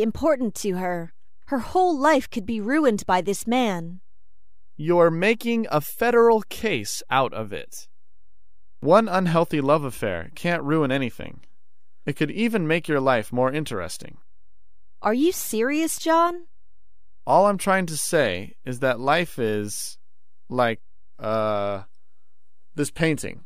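From start to finish there's a DC offset sitting under everything: the whole waveform rides a constant shift away from zero, at about -36 dBFS. You won't really hear it as a sound. A fixed bias like that sits at 0 Hz, so it shows up as steady energy at the very bottom of the spectrum rather than anything audible. The catch is that it eats into headroom, since peaks on one side reach full scale sooner.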